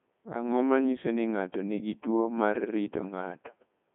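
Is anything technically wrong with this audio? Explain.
Yes. Throughout the speech the voice sounds robotic and buzzy, thin and band-limited, with nothing above about 3.8 kHz and the low end cut near 150 Hz. This is the Codec 2 vocoder at work, at a rate that fits 3.2 kbit/s. Rather than keeping the waveform, it transmits only pitch, voicing, energy and a coarse spectral envelope, and the decoder rebuilds the voice from sine waves. The result is heavy synthetic colouring across the whole clip.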